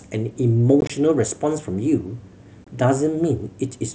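Speech with two bursts of chopped gaps: from 0.81 to 0.90 s, about 45 ms of sound drops out in scattered holes, longest 22.5 ms, then 22.5 ms lost at 2.64 s. This is unconcealed Bluetooth headset packet loss, with missing mSBC voice packets left as silence or an idle pattern.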